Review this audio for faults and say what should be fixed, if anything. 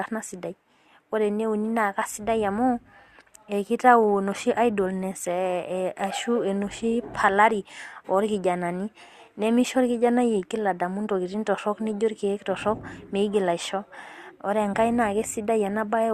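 Nothing stood out on listening to this speech recording, so there is nothing here that needs fixing.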